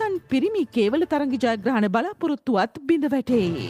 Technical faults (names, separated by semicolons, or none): none